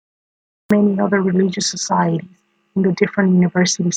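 It opens with digital silence until about 0.71 s, then a cut-off start drops straight into speech at "other religious societies in", with no attack, because capture began late.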